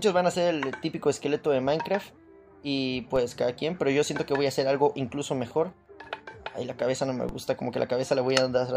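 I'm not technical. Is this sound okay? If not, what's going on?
No. At 3.16 and 7.29 seconds the signal's resting zero line suddenly jumps, a DC step, and then drifts back. Each jump is heard as a brief low thump or click, while the sound itself carries on unchanged.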